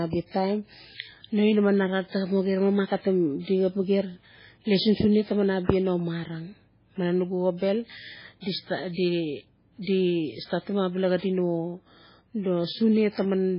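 Speech runs through all 13.6 seconds with heavy MP3 compression damage. It likely comes from encoding at a very low bitrate, consistent with about 16 kbps. Nothing survives above 5.3 kHz, so s sounds lose their hiss and the sound turns watery and swirly, with smeared onsets. On a spectrogram this shows as a flat ceiling at 5.3 kHz, with patchy holes below it that flicker on and off between frames.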